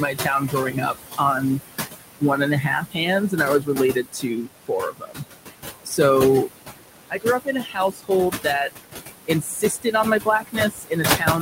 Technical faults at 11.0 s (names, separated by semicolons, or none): noise suppressor artifacts; speech cut by the noise suppressor